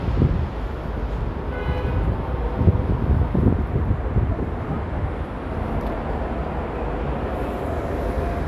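No technical faults are audible anywhere in this recording of sounds.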